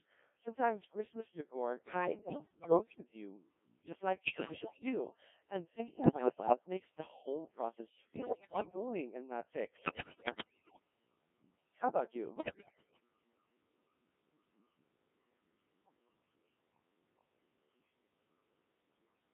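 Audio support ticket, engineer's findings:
Codec 2 vocoder, whole clip. Speech is robotic and buzzy, band-limited to roughly 200 Hz to 3.5 kHz. Decoder rebuilds the voice from sine waves using only pitch, voicing, energy and a coarse spectral envelope, so the real waveform is gone. Damage is heavy, consistent with a low mode, something like 1.3 kbit/s. Probable component: the digital-radio voice path itself.

Bit errors on digital voice radio, six bursts: 2.01–3.04 s, 4.24–4.83 s, 6.04–6.56 s, 8.16–8.76 s, 9.76–10.80 s, 12.36–13.00 s. Voice lurches in pitch, level and tone colour, breaking into warbles and bleepy gibberish. Flipped bits corrupt per-frame parameters. Around one bit in ten is bad early on, and it gets nastier from 8.16 s, nearer one in five. Probably a fringe-coverage RF link.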